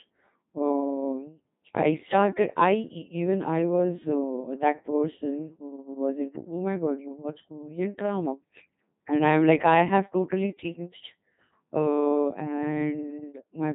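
From start to finish the speech has passed through a Codec 2 vocoder, which discards the waveform and rebuilds the voice from sine waves driven by pitch, voicing and envelope data. The heavy damage fits a 2.4 kbit/s mode, leaving a robotic, buzzy voice with nothing above 3.8 kHz.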